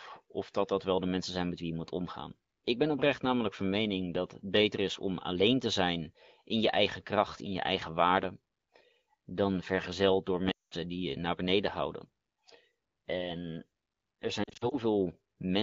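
At 10.51 s, after "dan vergezeld door", lost AMR speech frames make the decoder drop to near silence within two frames, leaving a gap of 0.2 s. "die je naar beneden" then returns weak. From 14.43 to 14.75 s, scattered short losses cause brief warbles rather than a clean silent gap.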